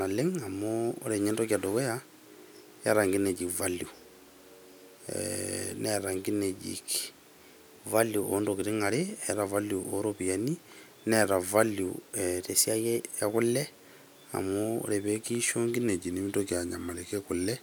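Speech that jumps about a semitone sharp and about 6% faster at 7.26–8.28 s and 12.41–13.02 s, then drops a semitone flat and 6% slower from 15.88 s to the end, is likely a drift correction step from clock-matching software changing playback rate.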